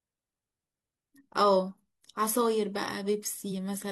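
At 3.48 s to 3.52 s, compressed frames are skipped. The speech jumps forward, losing about a tenth of a second. That fits roughly two 42.7 ms frames never reaching playback.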